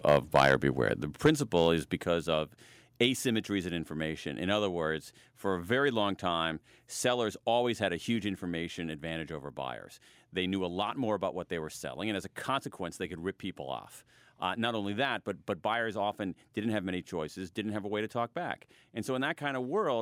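From 0.08 to 0.55 s, the speech has a harsh, crackling edge on its loudest syllables. This is microphone overload. The input level was likely set too high. Peaks run about 7 dB past the converter's ceiling, and their tops are sheared flat on around 2% of samples.

At 1.02 s, the whole sound drops abruptly by about 6 dB. Voice and background fall together. This is a microphone volume stepped down, likely the call software cutting the device's input gain after that distorted stretch.

Overload returns from 1.25 to 1.30 s, about 5 dB over. Roughly 7% of samples are clipped. It likely comes from the input still being too hot. A lighter overload follows from 1.57 to 1.60 s, only about 1 dB over, with about 0.7% clipped. It is likely caused by the same high gain.

The volume steps down again at 2.04 s by about 5 dB. This is likely the software pulling the gain lower once more. A last small step of about 2 dB comes at 3.06 s, just before "in information". 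It is likely a final automatic trim of the input level.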